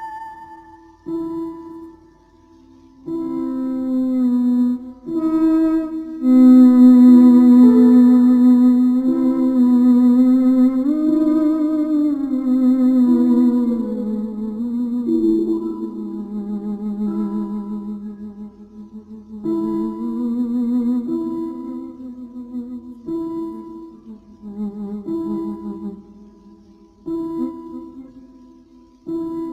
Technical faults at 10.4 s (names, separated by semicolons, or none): crude rate conversion